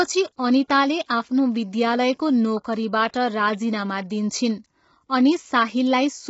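Low-delay AAC compression affects the speech from start to finish. The voice sounds rough and grainy. Noise fills the gaps between the pitch harmonics. Nothing is heard above about 7.7 kHz, so the top band is dull and clipped away. The damage is heavy. Its likely cause is the AAC-ELD codec at a low bitrate, which fits about 16 kbps. Its short frames resolve pitch poorly and leave too few bits for clean detail.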